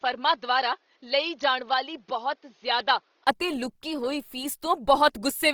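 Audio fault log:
throughout: Opus compression, likely at a low bitrate in its music mode; speech sounds grainy and rough, with a spectrogram showing noise-filled bands up to about 20.2 kHz.
0 to 3.27 s: input switched to a poorer device, likely; duller, quieter by about 5 dB, nothing above 6.5 kHz, a 20 ms gap before "ਅਤੇ ਲੁਕੀ ਹੋਈ".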